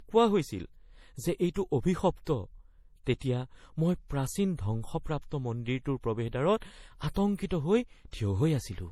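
Throughout, the speech carries layered, swirly smearing under a flat spectrogram ceiling at 17.8 kHz. The likely cause is transcoding between lossy codecs, from MP3 to HE-AAC.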